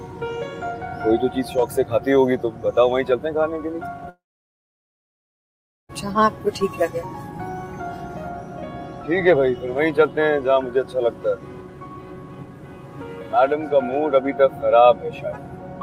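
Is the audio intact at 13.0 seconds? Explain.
Yes, at 13.0 seconds the audio is intact, with no dropout, click, distortion or other fault at that point.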